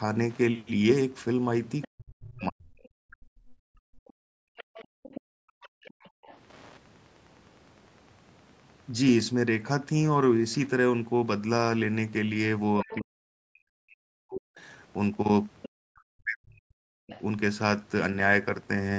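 Wi-Fi interference runs through the whole clip. A faint tick repeats every 102.4 ms, about ten times a second, well below the speech. A nearby radio's beacon is being rectified by the audio circuit, so the ticking never stops.

From 1.82 to 6.37 s, a second voice sits in the background, about 20 dB under the main speech. This is the other side's voice leaking through. It is likely loudspeaker echo the echo canceller failed to remove from the microphone.

From 1.87 to 2.75 s, the main voice dips hard, by roughly 40 dB at worst. About a second is affected. This is speech suppressed in double talk. Both sides likely spoke at once, so the canceller turned everything down.

From 3.03 to 6.23 s, the room sound drops out while the far side plays. The deepest dip is about 40 dB, and about two seconds are affected in all. This is background gated by the echo canceller, which clamps the microphone until it releases.

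From 12.83 to 17.12 s, double-talk suppression returns. The voice dips for around three seconds in total, again falling up to roughly 40 dB. The second voice leaks through twice in this stretch. A brief scrap comes at 12.89 to 13.01 s, about 15 dB down. A longer stretch runs from 15.62 to 17.21 s, about 20 dB down. The top end stops at 8 kHz throughout, from the call's normal microphone processing.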